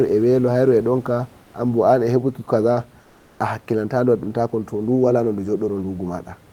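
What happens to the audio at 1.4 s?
Comfort noise in place of the background, 1.43 to 1.53 s, just before "anbo anhebuki kaza a": likely discontinuous transmission swaps the real room noise for about 100 ms of steady, featureless synthetic noise.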